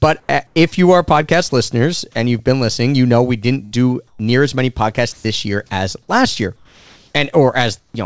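From 0.20 to 0.56 s, just before "if you are", the sender has likely stopped transmitting during the pause, so the receiver's comfort noise replaces the real background with a steady, featureless hiss.

At 1.49 to 1.52 s, between "if you are" and "listeners and you've been", the voice detector likely misjudged part of the sound as background and stopped sending. About 20 ms of speech is lost to comfort noise, leaving a tiny gap.

From 3.65 to 3.74 s, a burst of packet loss left the receiver without about 60 ms of audio. It stretched the last sound and faded it out, so a brief held, fading sound stands in for the missing part before the speech resumes further on.

At 4.07 to 4.19 s, just before "as many podcasts", comfort noise likely takes over the background. The background drops about 5 dB and loses its texture.

From 5.12 to 5.24 s, the voice detector likely treated part of the speech as background. 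About 80 ms of sound is dropped and replaced by flat noise, so the speech briefly vanishes.

From 6.56 to 7.13 s, comfort noise likely fills the pause. The background becomes a smooth, uniform hiss about 3 dB quieter, in the same band-limited sound as the rest of the call, with nothing above 8 kHz.

From 7.79 to 7.94 s, comfort noise likely replaces the background again, this time about 11 dB quieter.

At 7.91 to 7.94 s, the onset is clipped by the voice detector, which was likely slow to register the returning sound. The first 30 ms are missing, so the sound starts abruptly, without its soft beginning.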